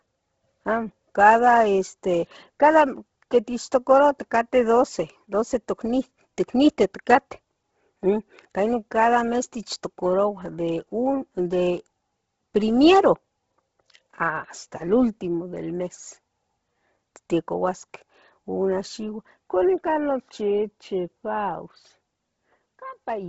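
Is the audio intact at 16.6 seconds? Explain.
No. At 16.6 seconds, as throughout the clip, the speech carries heavy Bluetooth LC3 compression damage, likely from a low bitrate around 16 kbps. Nothing sounds above 7.7 kHz, and the upper band has a breathy, grainy noise-fill texture. A plain low-pass filter would just dull the sound without that grain.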